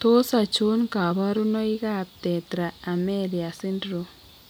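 No technical faults are audible anywhere in the speech recording.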